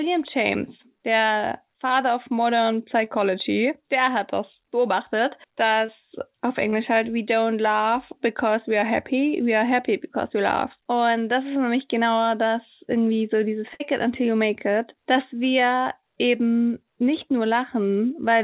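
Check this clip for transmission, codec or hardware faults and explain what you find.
The clip has two kinds of transmission fault: repeated short concealed packet loss and one burst of packet loss. All of it is heard through a narrowband call path with nothing above 4 kHz, which fits a telephone codec such as G.711.

Short concealed packet loss occurs at 1.88, 3.04, 5.86, 6.70 and 8.81 s (just before "happy we are happy"), and at 15.14 s (between "until you make it" and "wir eben nicht"). Each is a brief smear or wobble. Roughly 20 ms of audio never arrived, and the decoder filled the hole by extending the preceding sound.

A burst of packet loss runs from 13.74 to 13.82 s, between "das irgendwie so dieses" and "it until you make". The last sound is held and fades away. About 60 ms of audio was lost, so the receiver stretched the last sound while attenuating it, and the audio resumes with that section missing.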